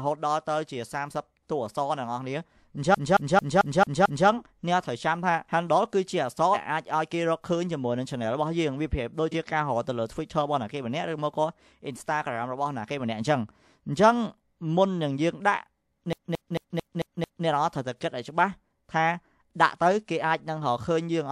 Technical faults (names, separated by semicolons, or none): CD stuck on one turn; compressed frames skipped